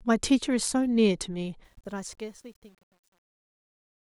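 From 1.64 s to the clip's end at 4.10 s, the fade-out beginning around 1.6 s has truncation distortion. Resolution fits about 9 bits without dither, so from 2.13 s the tail turns gritty. The waveform shows square steps, and the spectrogram shows broadband grit.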